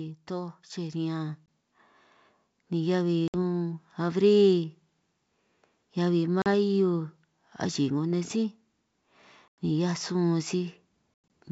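Speech over a G.722 wideband call, which sounds like the full 64 kbit/s rate with a light hiss in the upper band. From 0.27 to 1.9 s there's automatic gain rising: the AGC decides the input is too quiet and lifts voice and background together by about 5 dB. Then there's packet loss on an ADPCM call, with hard silent holes at 1.46 s (20 ms), 3.28 s (60 ms), 6.42 s (40 ms), 9.48 s (100 ms) and 11.14 s (120 ms spread over 160 ms). After each hole, the decoder's predictor is out of step, so the audio comes back slightly distorted before it settles.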